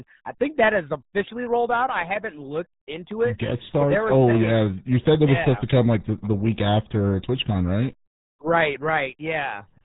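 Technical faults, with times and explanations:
Throughout, RealAudio 14.4 codec: the speech is muffled and gargly for the whole clip, with nothing heard above 3.8 kHz, so sibilants and consonant edges go dull. Damage is heavy, and the voice has a bubbly texture. This old dial-up speech codec squeezes audio into a tiny data stream by modelling only a coarse outline of the spectrum, and the result fits a rate of around 8 kbit/s.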